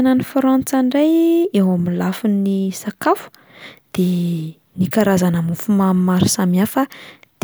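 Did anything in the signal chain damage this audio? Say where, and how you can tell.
No, nothing in the signal chain damaged this audio.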